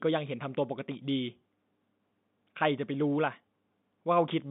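No technical faults are audible.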